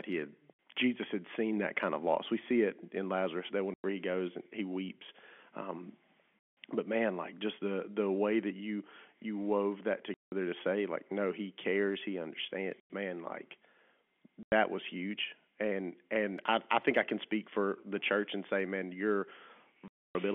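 Packet loss filled with silence cuts holes in the speech seven times: at 0.54 s, 3.74–3.84 s, 6.39–6.56 s, 10.14–10.32 s, 12.8–12.9 s, 14.43–14.52 s and 19.88–20.15 s. The gaps run from 60 to 270 ms. Each one is a run of lost packets replaced by dead silence. Their lengths step in 10 ms units, which fits 10 ms packets. The holes have hard edges, set in the narrow telephone-band G.711 sound.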